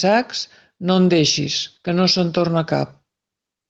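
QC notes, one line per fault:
0.93 s to end, call bitrate drop: encoder squeezed from 48 to 17 kbps and top end cut from 20 to 12 kHz, so speech turns coarse and dull.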